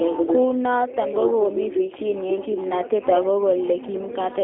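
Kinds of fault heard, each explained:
G.729 codec: The speech was squeezed through a low-rate voice coder that keeps only a vocal tract filter, a pitch predictor and a handful of pulses per short frame, then rebuilt at the far end. The sound is confined to a telephone band of roughly 300 Hz to 3.4 kHz, with nothing above 3.6 kHz, and carries a plainly audible rough, synthetic buzz throughout, which fits an 8 kbit/s G.729A link.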